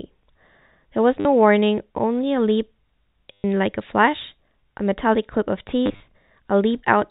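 Packet loss with last packet repeated at 1.2–1.25 s (50 ms), 3.33–3.44 s (120 ms) and 5.86–6.0 s (80 ms, scattered) gives 100 Hz robotic stutters that fit 10 ms packets.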